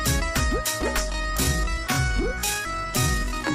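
From 1.08 s to the end the audio abruptly slows to about 0.57 times its pace at unchanged pitch, likely a time-stretched section padded with repeated short pieces. At 2.64 s a brief glitch comes from damaged data in a compressed stream, where the decoder lost sync and resumed at the next frame.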